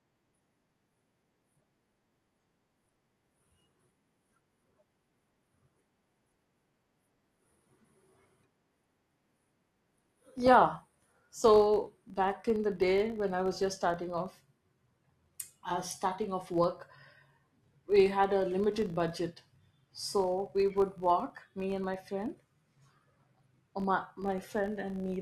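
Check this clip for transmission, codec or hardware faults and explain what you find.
One fault runs through the whole speech clip: a filter restarted on every block. Each block starts from silence, so it opens with a small transient. These repeat at 50 Hz, pointing to 20 ms blocks. The result is a steady buzz that rises and falls with the speech level.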